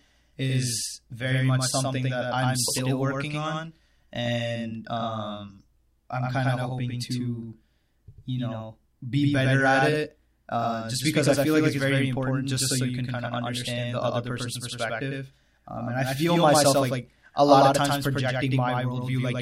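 A doubled audio track runs throughout the speech. A second, equally loud copy trails about a tenth of a second behind, likely from a slower duplicate capture path.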